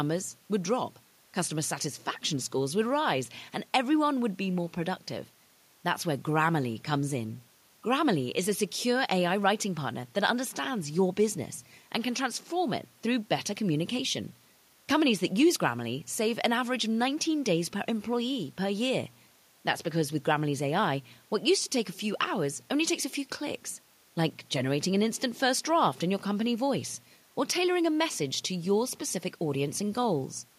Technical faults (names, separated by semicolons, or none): none